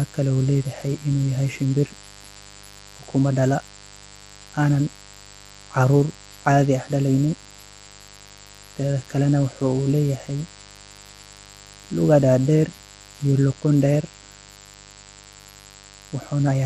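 Mains buzz runs through the entire speech recording, around 25 dB below the speech, from sharp switching spikes entering twice per 50 Hz cycle through a dimmer, rectifier or unshielded connection.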